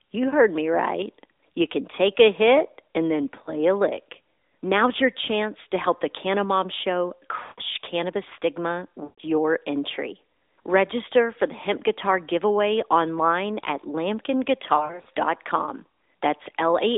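Lost AMR speech frames occur four times. At 3.44 s, between "a hit and then" and "a lick", a single 20 ms frame drops out, giving a brief dip or warble. At 7.42 to 7.60 s, just before "cannabis stigma", 160 ms is lost, and at 9.04 to 9.21 s, between "cannabis stigma" and "your entry", 140 ms. In each of these runs the sound is drawn out and then fades toward silence. From 14.78 to 15.09 s, 160 ms of loss is scattered across 280 ms in runs of no more than 40 ms, producing a string of short dropouts.

The cause is radio errors that made frames fail their checksum. For each bad frame the decoder carried forward the last good pitch and vocal tract settings while lowering the gain, which is why a stretch of consecutive losses smears and then dies away. After each gap the voice returns weak or rough for a moment. The AMR narrowband mobile codec underneath confines the speech to roughly 300 Hz to 3.7 kHz, and its light coding texture fits the 12.2 kbps mode.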